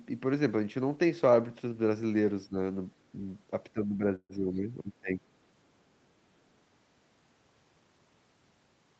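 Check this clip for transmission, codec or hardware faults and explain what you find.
Two kinds of fault are audible, both typical of a call connection. The speech tops out at 8 kHz, consistent with Opus at about 24 kbps.

At 2.47 to 2.57 s, and again from 3.73 to 5.22 s, the speech ducks by up to about 15 dB, thinning and dropping out in patches. This is speech suppressed in double talk: the echo canceller likely confused the talker with loudspeaker echo while both sides spoke, and turned the talker down.

From 4.15 to 4.32 s, inside that longer dip, the sound stalls. About 140 ms is filled with a fading continuation of the last sound, including roughly 50 ms of silence, and then the speech resumes with nothing lost. This is a call audio freeze, likely caused by late packets draining the jitter buffer, so the playback was delayed rather than cut.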